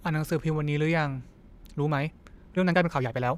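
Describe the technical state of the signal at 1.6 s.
At 1.6 s the speech sounds rushed, running about 1.51 times faster with its pitch unchanged, from 1.4 s to the end. This is a time-stretched section, likely software squeezing the audio by dropping short pieces to keep pitch.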